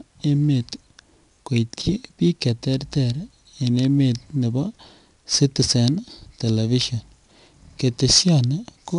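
4-bit ADPCM compression affects this speech clip throughout: coarse 4-bit prediction steps leave a gritty hiss on loud passages and rough attacks, with nothing above 10.6 kHz, which fits roughly 89 kbps.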